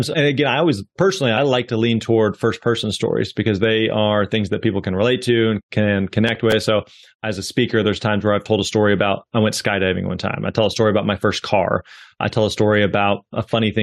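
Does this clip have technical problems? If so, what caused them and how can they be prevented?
Yes. Processor overload crackle runs from 6.28 to 6.53 s. The processor missed a handful of audio deadlines, and each missed buffer replayed stale audio with hard edges, producing gritty crackle. The pattern fits buffers of only a few milliseconds. Larger buffers or a lighter processing load would prevent it.

An overlap between stream segments at 8.46 s causes a tiny skip. The time stamps of two 6 s segments overlapped, so the player trimmed sound that was not actually doubled, and the waveform jumps. Generating accurate, contiguous segment time stamps would prevent it.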